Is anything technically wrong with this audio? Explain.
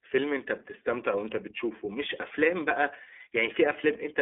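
Yes. Throughout the speech, the iLBC codec leaves a narrowband, slightly rough and synthetic sound, with nothing above 3.6 kHz. Each 30 ms frame's excitation is coded independently, which fits the 13.33 kbps mode, and the codec damage is plainly audible.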